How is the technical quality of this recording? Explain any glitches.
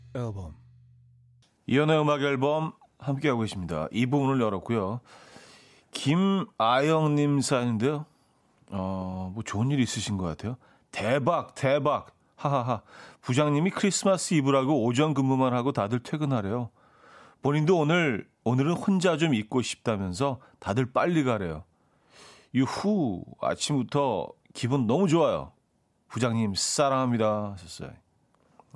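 The recording has no technical glitches to explain. Nothing in the audio chain intrudes on the speech at any point.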